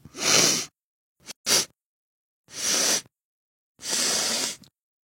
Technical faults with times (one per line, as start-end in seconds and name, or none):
1.31-1.46 gap at a join of encoded pieces